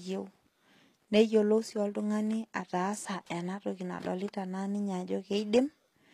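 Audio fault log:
Throughout, HE-AAC compression likely: speech treble sounds gritty and lispy on s sounds, copied upward rather than simply dulled as with a lowpass; nothing above 14.9 kHz, fitting a low bitrate.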